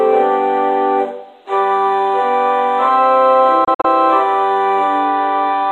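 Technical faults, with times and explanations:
3.64 to 3.85 s, digital broadcast dropout: the receiver stopped getting usable frames and muted, so the sound drops out in short holes about 96 ms in total, spread across roughly 190 ms. The longest gap lasts 48 ms, and each edge fades in about 8 ms, which fits around four lost frames. What fell in those holes is simply gone. On a waveform, the trace collapses to flat silence in brief patches, and a spectrogram shows blank vertical columns across every frequency.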